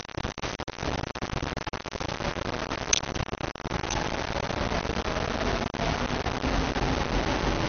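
Low bit depth without dither runs from the start to the end. The audio is likely rounded to very few levels, consistent with about 7 bits, so the error tracks the signal and sits nearly as loud as the sound itself, giving a coarse, grainy distortion.

MP2 compression is also present throughout. Nothing remains above 6.4 kHz, pointing to a low bitrate around 48 kbps that likely starved the upper sub-bands of bits. The sound is dull, with a plainly audible gurgling, granular texture in the bands that survive.

A train of clicks runs from 2.30 s to 7.67 s. About forty evenly spaced pulses arrive at 6.35 per second, peaking louder than the surrounding sound. This is likely interference or a faulty connection, and it is heard as a steady ticking laid over everything, including any quieter stretches.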